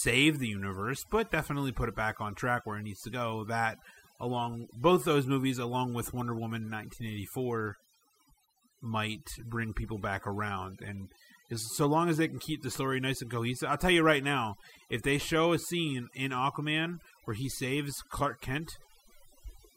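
Overdone noise removal runs through the whole speech clip. A noise reduction stage was set too aggressively. It cuts individual frequency bands that sit near its noise estimate. Quiet parts of the voice vanish with them. Pauses drop and break up into twinkling specks.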